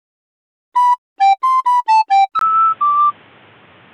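At 2.39 s, after a brief 20 ms gap, the sound turns dull and slightly quieter, losing everything above 3.8 kHz, with faint new noise. This is likely an input switched to a poorer device.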